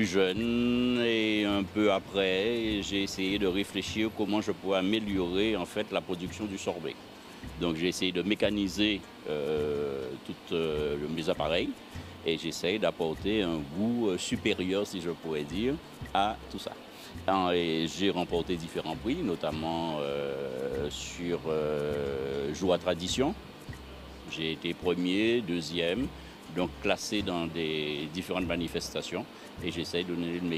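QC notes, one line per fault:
No faults were heard in this clip. There is nothing to log against any time.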